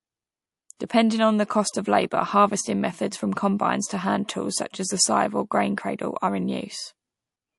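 A speech clip with plainly audible, watery, swirly coding damage throughout: smeared consonants and a metallic edge on s sounds. This is likely MP3 compression, and the amount of damage fits a low bitrate around 48 kbps, where weak frequency lines flicker between frames. Pre-echo appears at 0.77–0.80 s and at 0.87–0.90 s, the second just before "on the cost of". A short hiss of about 20 dB and about 15 dB respectively runs 30–33 ms ahead of each attack, because quantisation noise spreads across a 48 ms transform window with no switch to short blocks.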